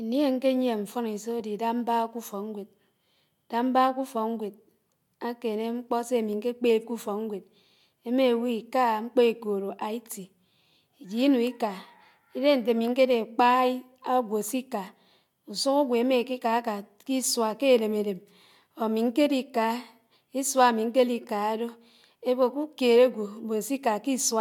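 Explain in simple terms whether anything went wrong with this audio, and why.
Two short glitches interrupt this speech: a corrupt frame decoded at 1.40 s, and a louder one at 19.55 s. Damaged bits reached the decoder, which played them anyway. That misplaced sound energy for an instant, making a brief chirp or blip.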